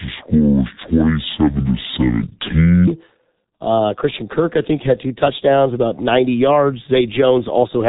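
Speech runs through the G.723.1 codec from start to finish. Nothing survives above 3.8 kHz, and the heavy, hoarse, smeared consonants point to a very low bitrate around 6.3 kbit/s. Unlike a plain low-pass filter, which only dulls the sound, this codec roughens the voice itself. From 0.0 to 2.87 s a section plays at the wrong speed, 0.549 times normal and about ten semitones low. Because pitch and pace drop together, this is a speed fault rather than a pitch shift. The likely cause is playback against a mismatched clock.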